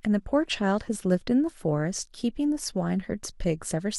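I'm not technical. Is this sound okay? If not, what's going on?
Yes, this one's fine: nothing in the recording sounds broken or glitchy, so there's nothing here to worry about.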